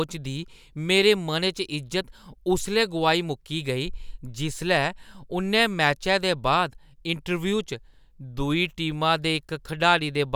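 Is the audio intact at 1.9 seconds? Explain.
Yes, the speech at 1.9 seconds plays through cleanly with no audible fault.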